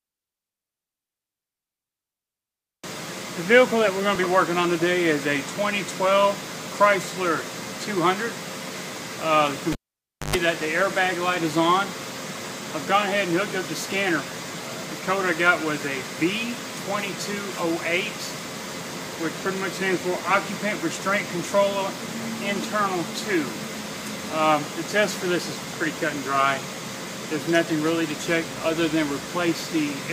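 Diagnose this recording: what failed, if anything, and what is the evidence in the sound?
Cable pulled and plugged in, 9.72 to 10.36 s, at the analogue wiring stage. A pop starts 0.58 s of near silence, including a 0.12 s burst of 50 Hz mains buzz as only the plug tip touches before grounding. A second pop marks reconnection.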